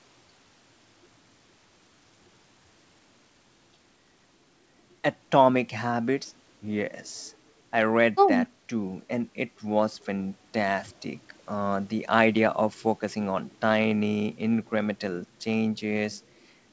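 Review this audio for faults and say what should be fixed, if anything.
Nothing here needs fixing. The speech carries nothing above 8 kHz, which is what a wideband call codec such as G.722 passes.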